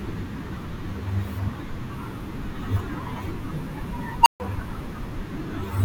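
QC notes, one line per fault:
4.21–4.40 s: unstable filter. A tone around 1 kHz swells over the speech to hard clipping within 47 ms as the recursive filter's feedback runs away without limit, then the arithmetic overflows and the output drops to 140 ms of silence until the filter resets.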